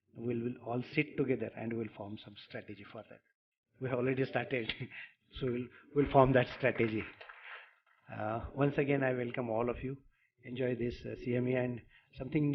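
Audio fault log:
No faults were found anywhere in this clip. Nothing in the audio needs a time, a value or an explanation.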